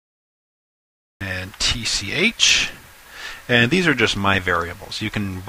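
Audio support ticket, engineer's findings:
Cut-off start: dead digital silence to 1.21 s, then sound jumps in mid-event, no attack. Capture or stream kicked in late, clipping off the front.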